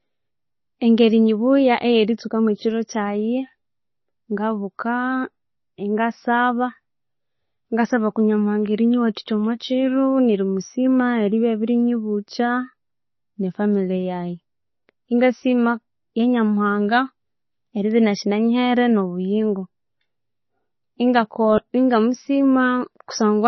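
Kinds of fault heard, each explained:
MP3 compression: The sound is watery and smeared with nothing above 6 kHz, likely heavy MP3 coding at a very low bitrate. A spectrogram shows a flat ceiling with flickering holes.
Bit error spike: One sharp tick at 11.8 s, just after "nerimusima eribya", and another at 17.91 s. Each is a lone vertical waveform spike and a thin full-height spectrogram line.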